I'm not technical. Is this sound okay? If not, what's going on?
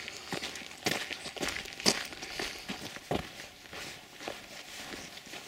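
No. From about 2.80 to 3.07 seconds there is a short burst of crackle, a gritty, tearing sound laid over the audio, and then it clears. This is processor overload crackle. The computer handling the sound got too busy to keep up. Audio is processed in tiny slices of a few milliseconds each, and here more than a dozen of them weren't ready in time. They were simply skipped, leaving little sharp-edged gaps that together sound like crackling.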